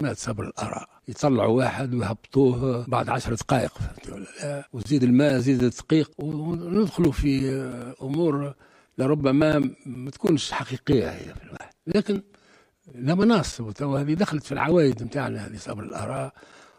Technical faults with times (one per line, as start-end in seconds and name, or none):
none